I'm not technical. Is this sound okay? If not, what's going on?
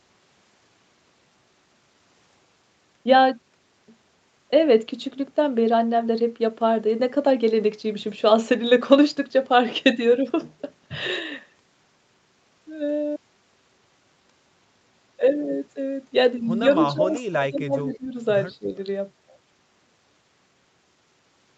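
No. Between 16.79 and 18.16 s the speech keeps dipping and breaking up, sinking to a much quieter, thinner level for about a second in total, with one more short dip from 18.59 to 18.71 s. This is speech suppressed in double talk. Both people on the call were likely talking at once, and the echo canceller couldn't tell this talker apart from the loudspeaker echo, so it turned everything down together.

At 16.8 s, and again from 17.79 to 17.97 s, you can hear a faint second copy of the speech trailing about 154 milliseconds behind, the second one even quieter than the first. This is an echo leak. One side was likely playing the call through a loudspeaker, and its echo canceller missed some of what its microphone picked up from that speaker, so those leftover scraps were sent back down the line.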